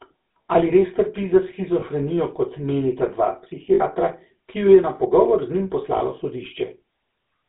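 Throughout, the speech carries the buzzy, gravelly roughness of the GSM full-rate codec, consistent with its 13 kbps coding: the excitation is rebuilt from sparse regular pulses. On a spectrogram, energy sits between 200 Hz and 3.7 kHz, with coarse, smeared harmonics.

At 1.80 to 1.83 s, between "res trpi za" and "kot menita dva", then at 3.74 to 3.82 s after "kot menita dva", and again at 5.98 to 6.01 s, lost GSM frames were concealed by repeating the previous frame's settings. Each gap sounds like a brief rough, metallic ring. On the waveform it appears as a short held stretch, and on the spectrogram as frozen horizontal bands. The 3.74 s gap is the longest, about 60 ms.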